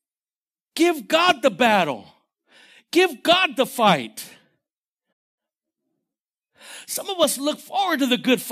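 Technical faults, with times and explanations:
5.12–5.39 s, playback stall: the player likely ran out of data or was blocked, so the speech drops to silence for 0.24 s before continuing.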